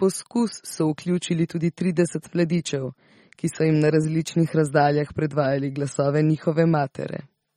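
From start to finish the speech carries a watery, swirling quality, with metallic chirps on the s sounds and softened consonant onsets, most likely MP3 compression at a low bitrate, somewhere near 33 kbps. The encoder, starved of bits, drops weak frequency lines that then flicker on and off between frames. A spectrogram would show those lines as isolated blotches and holes in the upper bands, and nothing at all above 19.2 kHz.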